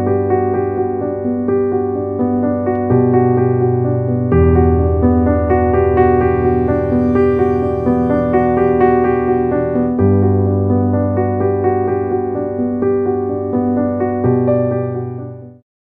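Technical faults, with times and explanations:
No technical faults can be heard anywhere in this recording.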